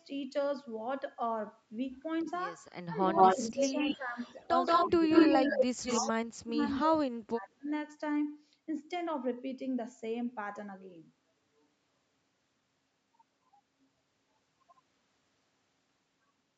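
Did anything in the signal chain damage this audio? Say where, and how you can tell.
Yes. From 2.2 to 2.3 s a faint delayed copy of the speech, about 30 dB down, trails it by 321 ms. From 3.14 to 6.1 s a much stronger copy, about 5 dB louder than the speech, follows 174 ms behind. This is echo leak in the call processing, likely from a loudspeaker echo canceller that let its microphone pickup through.

The speech also sinks in pieces: by around 15 dB between 2.86 and 4.19 s, slightly between 4.87 and 5.1 s, and almost to silence, around 40 dB down, between 5.68 and 7.69 s. This is speech suppressed in double talk, likely the echo canceller turning the talker down while both sides spoke.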